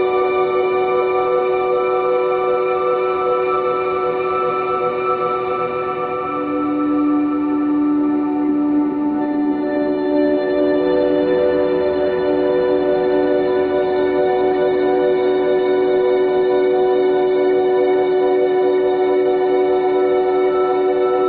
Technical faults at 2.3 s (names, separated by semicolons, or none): none